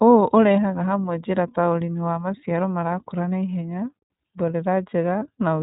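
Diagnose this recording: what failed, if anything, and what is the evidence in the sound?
The speech has a plainly audible rough, slightly synthetic texture from start to finish, and nothing above 4 kHz comes through, so sibilants sound dull. That is the iLBC codec at work, a codec-stage fault. This narrowband VoIP coder rebuilds each frame's excitation independently, and the coarseness heard here fits its 30 ms frame mode at around 13.3 kbps. The band limit and grainy timbre come from that coding.

From 5.19 to 5.23 s the speech briefly turns into a held, faintly buzzy vowel-like sound, and then the voice is right again straight away. This is a case of lost iLBC frames, a network-stage fault. The dropout lasts about 30 ms, which fits a single lost frame. The decoder filled the gap by repeating the last pitch cycle blended with noise. Each iLBC frame decodes without depending on earlier ones, so recovery was immediate.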